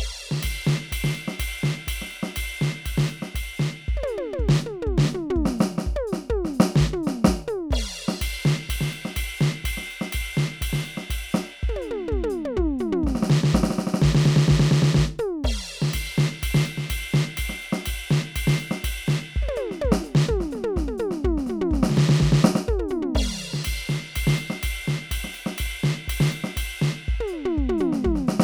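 Listening to this music recording, nothing stood out as a technical problem.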